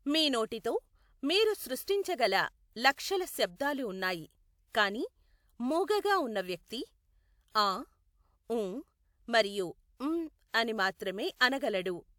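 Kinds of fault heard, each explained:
Pre-echo: the transform codec spread quantisation noise sized for a loud onset across its whole block, so the quiet moment just before each sharp attack in this speech filled with that noise. The result is a brief hiss ahead of four attacks, at 1.84 s, at 3.56 s just before "ఉన్నాయి కానీ", at 10.94 s and at 11.37 s. Each smear lasts 32 to 57 ms and leaves the onset sounding soft rather than crisp.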